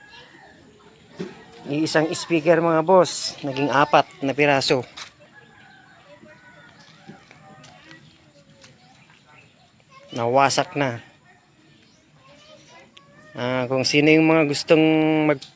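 From 4.0 to 7.6 s, the resampler restarted on every block while converting from 44.1 kHz to 16 kHz. Each 100 ms block was converted in isolation, so its edges were filtered against silence or wrapped-around samples instead of the true neighbours, leaving a small error at every boundary. It sounds like a steady ticking at 10 Hz riding on the sound. A spectrogram shows thin vertical broadband lines every 100 ms, and the waveform shows small discontinuities at the same spacing.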